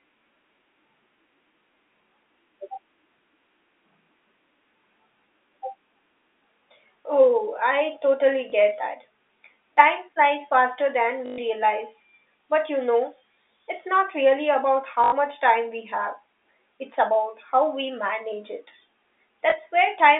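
Packet loss with last packet repeated at 8.5, 11.26 to 11.38, 15.04 to 15.12 and 19.5 s: the receiver replays the last chunk for gaps of 20, 120, 80 and 20 ms, which fits 20 ms packets. The longer runs buzz at about 50 Hz as a brief robotic stutter over the narrow telephone band.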